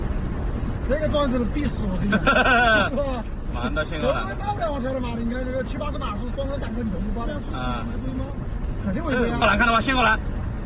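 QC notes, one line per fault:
Nothing stood out on listening; the sound comes through a narrowband call path with nothing above 4 kHz, as expected for a G.711 A-law link at 64 kbps.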